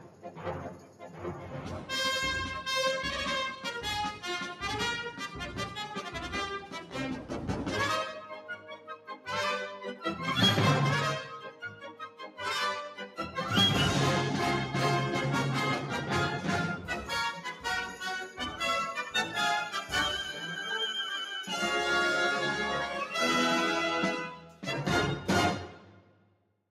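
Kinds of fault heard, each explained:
Noise suppressor applied to music or sounds: Throughout, the level pumps and flutters, with sustained material and decays thinning out while sharp onsets come through largely intact, swinging by roughly 10 dB. A noise suppressor designed for speech was left running. It judged steady tones, ambience and reverberant tails to be background noise and kept turning them down, so everything that holds or fades is treated as something to remove rather than as part of the sound.
Sound cut by the noise suppressor: Sustained or decaying passages sink audibly and their tails are clipped short at 0.0–1.9 s, 3.57–7.47 s, 8.31–9.27 s, 11.4–12.39 s, 16.77–18.6 s and 24.28–26.53 s. The deepest dips are about 10 dB, with about 9 dB near 3.6–7.5 s and about 8 dB near 16.8–18.6 s. Within each span, from about 0.7 to one and a half seconds is pulled down. The suppressor classed these portions as noise and attenuated them harder than the rest.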